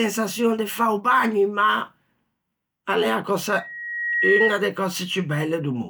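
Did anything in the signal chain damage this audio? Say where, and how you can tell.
Yes. From 3.49 to 4.65 s, a 1.9 kHz tone swells above the speech: a loudspeaker feedback squeal, where the microphone picked up its own loudspeaker and reamplified that frequency.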